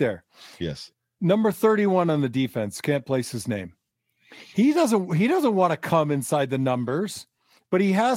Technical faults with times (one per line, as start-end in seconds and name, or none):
none